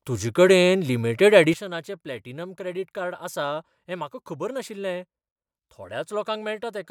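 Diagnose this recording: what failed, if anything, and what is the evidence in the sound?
A sudden gain jump occurs at 1.54 s, right after "तुजे कडेन लिमिडेट". The level drops by about 12 dB in a single step and stays down to the end of the clip. The speech and the background noise fall together, so the talker did not simply get quieter. There is no fade between the two levels. The likely cause is a digital gain setting or bit shift applied in processing without a ramp.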